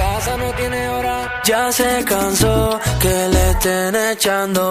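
No technical fault can be heard anywhere in the recording. Nothing interrupts or disturbs the sound at any point.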